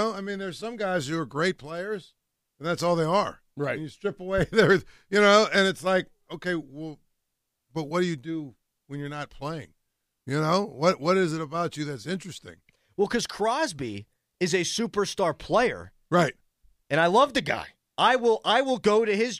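No technical faults can be heard anywhere in the recording.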